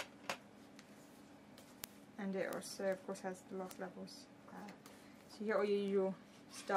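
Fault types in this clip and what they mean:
Word clock ticks: the receiving device runs on its own clock, not locked to the sender's, and the two drift apart by something like 200 ppm, so roughly every 0.1 s one sample slips and a sharp tick results. From 0.16 s to the end, some seventy ticks repeat steadily. A spectrogram shows thin vertical broadband lines at even spacing. The waveform shows a small single-sample step or glitch at each one.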